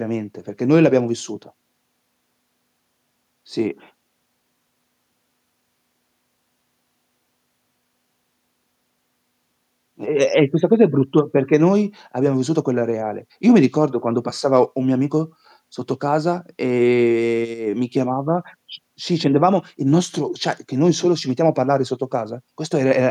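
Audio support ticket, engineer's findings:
Nothing stood out on listening to the speech, so there are no findings to log for this ticket.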